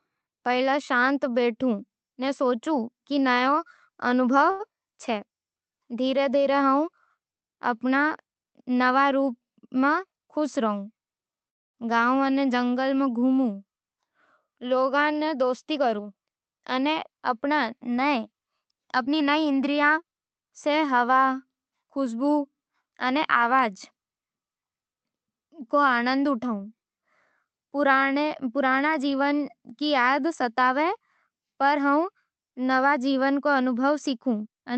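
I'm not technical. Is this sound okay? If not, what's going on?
No, there are a few hiccups in this speech clip, all from the kind of network trouble you get on internet calls.

From 3.35 to 4.63 s, right after "कि ई", there are repeated stalls (stutter). Three times the audio arrived late, so the receiver stretched the last sound to cover the wait, the longest about 93 ms. Nothing is lost, but it drags and stumbles.

At 11.49 to 11.77 s there's a call audio freeze, just before "गाँव अने जंगल में". The sound stops for about a quarter of a second, then picks up exactly where it left off. That's likely the audio getting held up in transit.

Then there's jitter buffer speed-up, which happens when the receiver has built up too much delay and trims tiny slices to catch up. At 9.61 to 10.37 s it runs about 10% fast. At 14.91 to 17.15 s and 19.07 to 20.04 s it runs about 7% fast. The pitch stays the same, but those stretches sound hurried.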